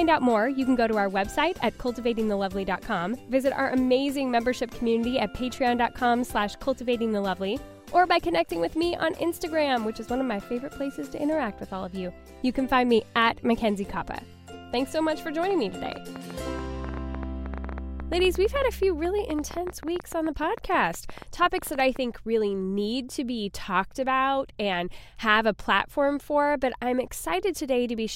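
From 15.43 s to 21.97 s, a train of clicks ticks over the sound at about 9 per second, unevenly spaced. Some seventy pulses peak about 5 dB above the audio, likely from interference or a faulty connection or power supply. A spectrogram shows thin vertical lines, and the waveform shows narrow spikes.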